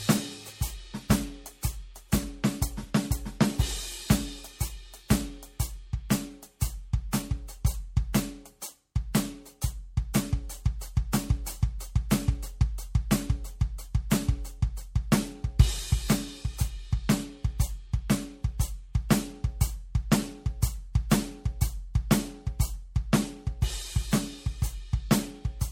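Throughout the music, the sound swirls and smears with a hollow, watery quality, blurred attacks and nothing above 16.7 kHz. This is generation loss, likely from around four MP3 passes at what sounds like 64 kbit/s, each re-quantising on a shifted frame grid so the damage accumulates.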